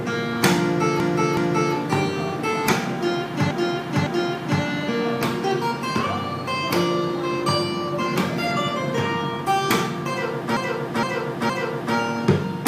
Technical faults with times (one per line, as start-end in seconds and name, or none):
1.00-1.74 repeated frames
3.51-4.62 repeated frames
10.57-11.96 repeated frames